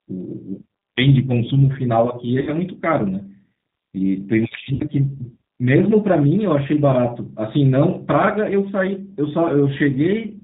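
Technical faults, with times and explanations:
throughout: G.729 codec. The sound is narrowband, with nothing above 4 kHz. The speech is clear but rough and slightly synthetic. The codec does not send the waveform. It sends a vocal tract filter, a pitch predictor and a few pulses per half of each 10 ms frame, and the decoder rebuilds speech from these. The damage is plainly audible, and the thin texture fits an 8 kbit/s stream.
2.41–2.52 s and 4.75–4.83 s: VoIP packet loss concealed by the speech codec. About 60 ms and then about 50 ms of audio never arrived, which fits six and then five lost 10 ms frames. The decoder filled each gap by repeating its last pitch and filter at falling gain. That stretches the sound into a brief buzzy tone or coloured noise that fades. Each frame builds on the one before, so the speech stays weak or distorted just after each gap.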